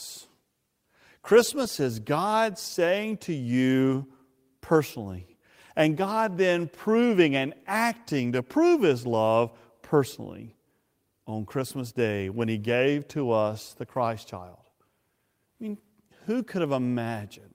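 No technical faults can be heard at any point in the speech.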